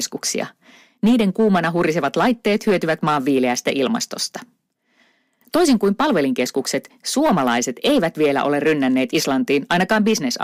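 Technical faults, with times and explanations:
Throughout, hard clipping: the speech is driven about 6 dB past the limit, so roughly 3 percent of samples are cut flat, adding harsh crackle on loud syllables.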